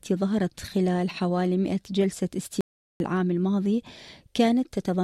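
At 2.61 s the speech cuts out mid-flow and does not return until 3.00 s, an audio dropout to silence lasting about 0.39 s. The gap carries no room tone. The likely cause is lost input (a disconnected device, failed link or stray mute) while recording continued, so that material is gone.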